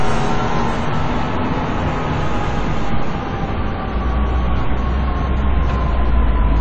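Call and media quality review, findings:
Dull, smeared throughout; nothing above 9.8 kHz, fizzy, warbling texture on sustained sound. Likely AAC compression, AAC-LC at a bitrate that fits around 32 kbps: starved quantisation lowers the cut-off, leaves spectral holes or fills bands with substitute noise.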